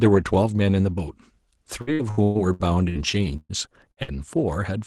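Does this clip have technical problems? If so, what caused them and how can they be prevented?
Yes. Between 1.81 and 2.98 s there's repeated packet loss (robotic sound). Six gaps land close together, the longest about 117 ms, and each is patched by stretching the last bit of sound. About a third of that stretch is filler, so it comes out choppy with pieces missing. Running a larger jitter buffer and in-band FEC over a shaky connection would help.

Then come three bursts of packet loss, at 3.37 to 3.52 s, 3.91 to 4.00 s, and 4.03 to 4.17 s. The receiver holds the last sound and fades it over the gap, roughly 120 ms for the first and about 55 ms each for the other two. The first one dips to silence for about 30 ms before speech picks up again, with that bit gone. Fixing congestion or Wi-Fi dropouts on the sender's link, or adding redundancy, would prevent these.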